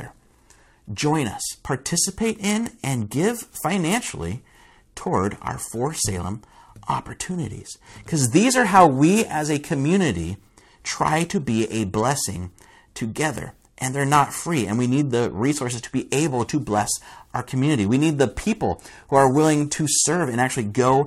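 The converter's sampling clock is being shaken by periodic clock jitter at a steady rate of around 1 kHz for the whole clip. Each sample is taken slightly early or late in a regular cycle, so every component of the speech gains sidebands spaced about 1 kHz above and below it, with the higher frequencies hit hardest. The result is a rough, metallic edge riding on the speech that disappears whenever the sound falls silent.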